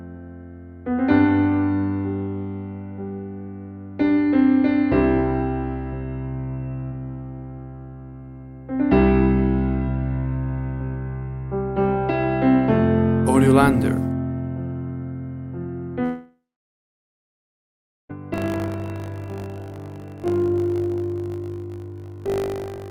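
From 16.03 s to 18.11 s the sound decays into a fading buzz and then about 1.7 s of near-silence before resuming further on, with the gap's material simply gone. This is likely a long network dropout, with the receiver concealing roughly 2.06 s of missing audio.

From 18.32 s to the end at 22.9 s, a robotic 50 Hz rattle rides on the signal whenever sound is present. This is buffer tearing: writer and reader have slipped, so a small slice of each period replays audio about 40 ms old, which fits a 20 ms period.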